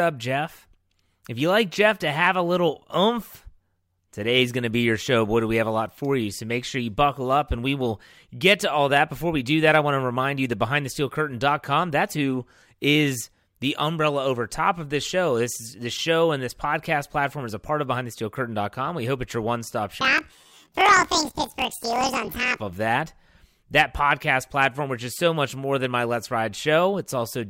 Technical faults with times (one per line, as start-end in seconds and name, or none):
20.01-22.60 planar audio read as interleaved